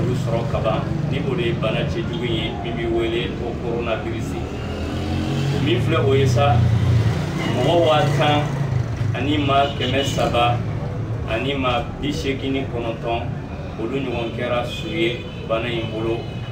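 Throughout, the top end sounds dulled, with a faint metallic shimmer on sharp, bright moments. This is imaging from linear upsampling, which fits audio raised from 22 kHz to 48 kHz by straight-line interpolation, leaving mirrored spectral copies between 11.0 and 22.1 kHz, roughly 40 dB down.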